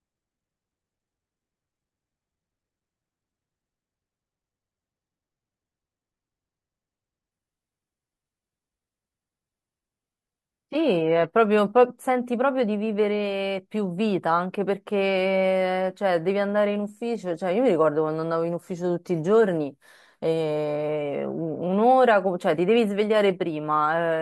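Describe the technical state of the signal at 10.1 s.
At 10.1 s the speech sits inside a stretch of adaptive stream at a lower bitrate, running from 7.32 to 11.32 s. The player has switched to a much leaner version of the stream while the connection slowed. The switch is abrupt and leaves no gap. The stream drops from roughly 96 kbit/s AAC to about 16 kbit/s HE-AAC. Codec artefacts are stronger.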